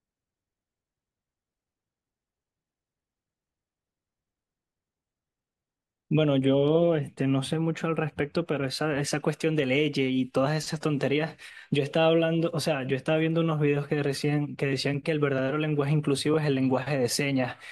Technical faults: none

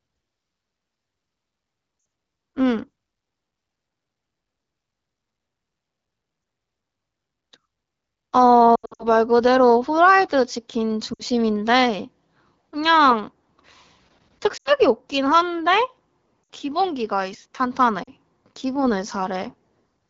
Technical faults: lost AMR speech frames

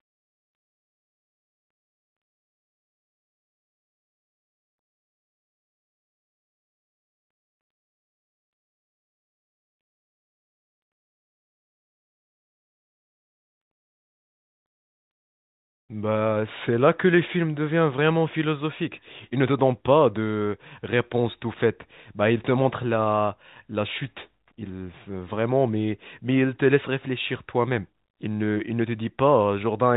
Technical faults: none

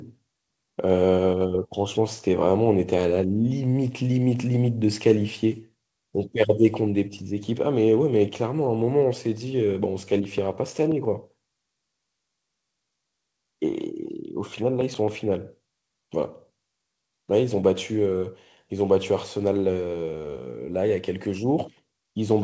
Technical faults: CD scratch ticks

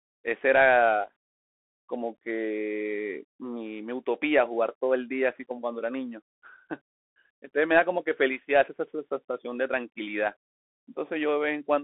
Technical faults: Bluetooth CVSD headset codec

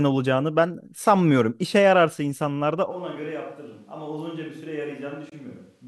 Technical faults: switch to a distant microphone; Bluetooth dropout

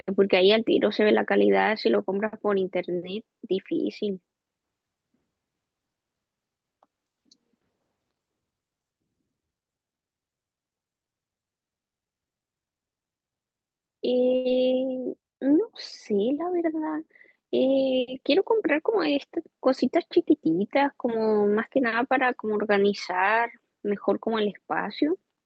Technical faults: short stall from a late packet; skip ahead; jitter buffer slow-down; jitter buffer speed-up

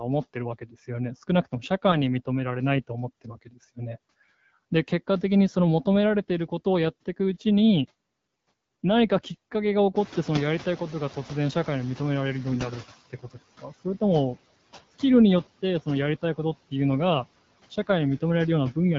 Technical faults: AMR bit errors; noise suppressor catching up

